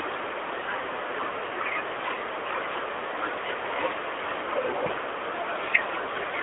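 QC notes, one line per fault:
No faults found in this speech clip. The AMR narrowband mobile codec path is working normally, with the sound confined to a telephone band of roughly 300 Hz to 3.5 kHz and the light coding texture expected of the 12.2 kbps mode.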